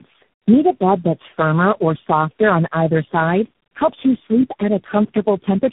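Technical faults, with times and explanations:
Throughout: tandem speech coding, each codec re-encoding the previous one's losses, pointing to about four in series; speech is rough, warbly, muffled, with nothing above 3.8 kHz.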